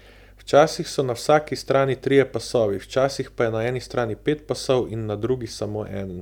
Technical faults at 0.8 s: none

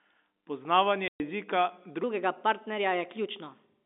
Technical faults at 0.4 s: none

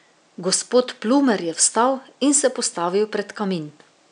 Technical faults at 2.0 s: none

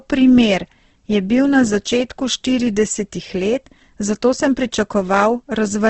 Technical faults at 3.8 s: Opus compression

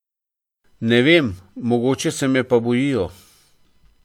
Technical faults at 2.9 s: none

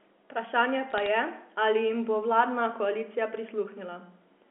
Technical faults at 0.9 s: bit errors on a digital phone line

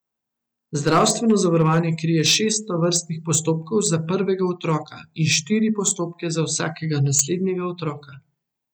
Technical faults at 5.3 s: hard clipping

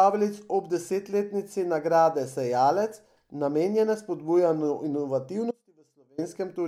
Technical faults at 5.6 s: audio dropout to a faint residue

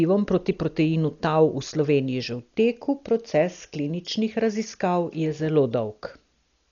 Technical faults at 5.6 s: Dolby Digital compression; dropped samples

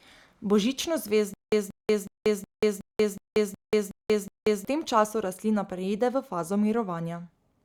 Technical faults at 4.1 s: stutter with silent gaps

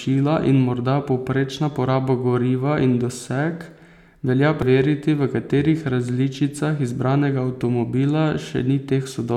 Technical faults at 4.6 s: damaged data in a compressed stream

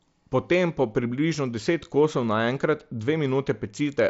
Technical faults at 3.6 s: none

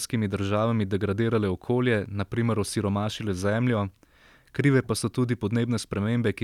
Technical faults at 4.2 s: none

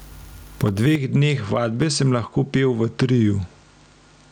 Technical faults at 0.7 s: gain pumping; electrical switching spike

